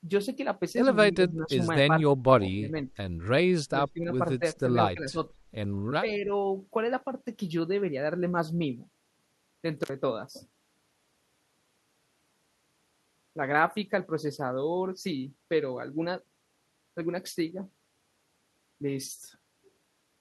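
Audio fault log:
1.12–1.57, 2.17–2.23, 2.49–2.75, 3.66–4.10, 4.60–4.67, 4.94–5.18 and 6.18–6.30 s, speech suppressed in double talk: The speech dips repeatedly, by about 5 to 20 dB. The likely cause is an echo canceller treating overlapping talk as echo and attenuating everything.
9.83–9.89 s, intermittent contact: The sound cuts out for about 46 ms, with crackle at both edges. A connection briefly opens, so the signal drops away abruptly and returns just as suddenly.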